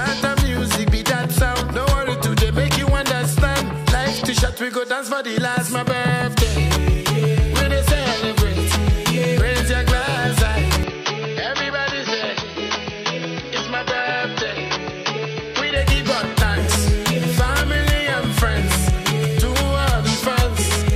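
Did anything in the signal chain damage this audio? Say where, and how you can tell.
Yes. The input likely switched to a poorer device at the driver from 10.83 to 15.76 s, cutting everything above 6.2 kHz, so the sound turns dull and quieter.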